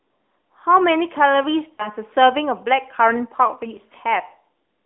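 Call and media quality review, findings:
AMR narrowband mobile codec, throughout. Speech confined to a 250 Hz to 3.5 kHz line band, with plainly audible buzzy, synthetic texture fitting a mid-rate mode near 10.2 kbps. Spectrogram shows a hard ceiling near 3.5 kHz and smeared harmonics.

Lost AMR speech frames, 1.74 to 1.93 s. A brief dip or warble fades, and the speech returns weak or rough. About 40 ms of concealment, consistent with two dropped 20 ms frames. Waveform shows a decaying envelope, and the spectrogram shows frozen, repeated formants.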